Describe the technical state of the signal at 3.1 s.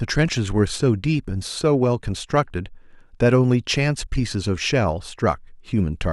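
At 3.1 s the speech signal is intact, with no audible fault at that point.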